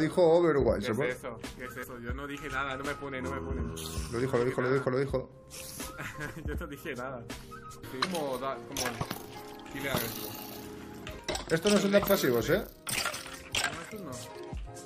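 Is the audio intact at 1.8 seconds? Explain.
No. Damaged data in a compressed stream occurs from 1.82 to 1.84 s. A stretch of the encoded stream is corrupted there, so the decoder cannot interpret those frames correctly. It loses its place in the bitstream and has to hunt for the next valid frame header before normal decoding resumes. What comes out during that brief gap is a short, unnatural chirp or blip, about 20 ms long, that does not belong to the surrounding sound.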